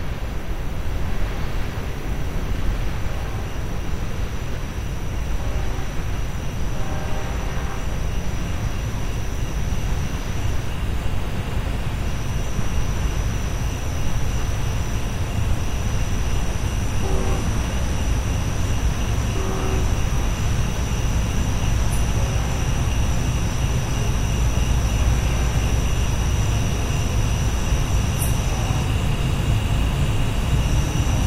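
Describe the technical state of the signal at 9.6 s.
At 9.6 s the signal is intact, with no dropout, distortion, clipping or other audible fault at that moment.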